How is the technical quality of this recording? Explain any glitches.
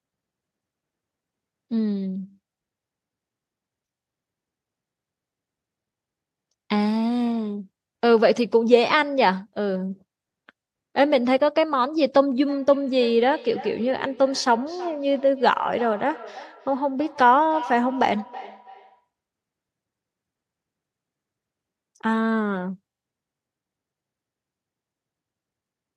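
The recording has one glitch: feedback echo between two devices, from 12.49 to 19.08 s. A second device on the call replays this microphone's signal, which this microphone picks up again and its own canceller never removes, so speech returns about a third of a second later, thinner and ringing, at about 17 dB below the speech.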